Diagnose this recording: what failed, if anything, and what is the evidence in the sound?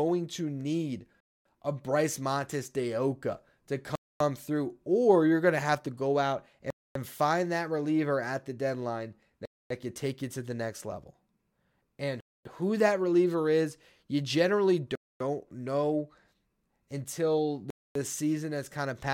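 A gap between chunks in playback or streaming: hard-edged 250 ms silences at 1.20, 3.95, 6.70, 9.45, 12.20, 14.95 and 17.70 s, between 2.5 s chunks of speech, showing as flat waveform blocks and empty spectrogram columns.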